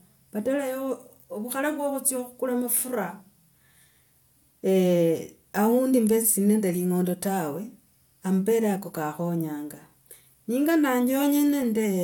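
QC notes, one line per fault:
No faults detected.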